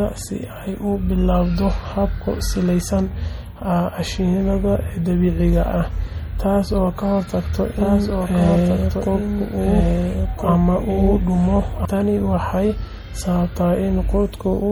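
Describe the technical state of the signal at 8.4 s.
At 8.4 s two faults overlap. A doubled audio track runs from 7.77 s to 11.85 s: a second, full-band copy of the speech sits roughly one and a half seconds behind the original, around 5 dB quieter, most likely from an edit or a second capture path holding two copies out of step. It has no room tail and switches in and out abruptly. On a waveform the copy shows as denser, overlapping envelopes. A spectrogram shows the same harmonic and formant patterns repeated after the fixed offset, with hard edges at both span boundaries.

Underneath, MP3 compression is plainly audible through the whole clip. The sound points to a low bitrate, around 48 kbps. With so few bits the encoder drops weak spectral lines, which come and go from frame to frame. That gives a watery, swirling texture, metallic chirps on s sounds, and smeared consonant onsets. A spectrogram shows speckled, blocky gaps in the upper bands.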